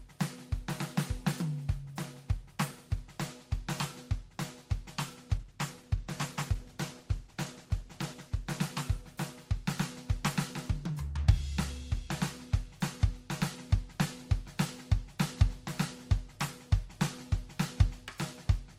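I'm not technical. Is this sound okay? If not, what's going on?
No, not quite. From about 5.4 to 10.0 seconds the music turns rougher and duller. That's a call bitrate drop: the connection briefly squeezed the audio into far less data, so detail and sparkle got thrown away. It's at its worst for nearly three seconds before clearing up.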